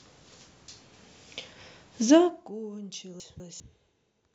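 A speech recording with two faults. From 2.14 to 2.55 s, a gain drop of roughly 20 dB is applied in unsmoothed steps, about 100 per second, causing zipper noise, a fine ticking that rides on the speech as it fades. Between 3.2 and 3.6 s, chunks play out of order: one 200 ms chunk plays a slot late, so the speech briefly jumbles across the hard joins.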